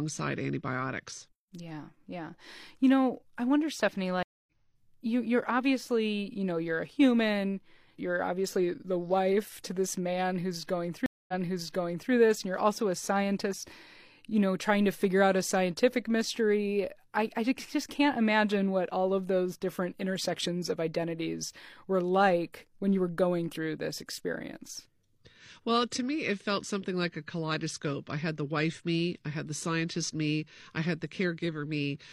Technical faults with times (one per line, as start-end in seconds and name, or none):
4.23-4.51 stream reconnect
11.06-12.12 stream reconnect